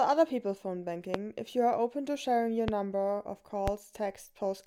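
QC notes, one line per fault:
1.14–1.18 s, 2.68–2.71 s, 3.68–3.71 s: loud pop, three single sharp pops, the first two roughly 20 dB above the sound and the last somewhat softer, with the sound continuing underneath. Each is likely a brief voltage spike, such as from a switch, static or a driver glitch.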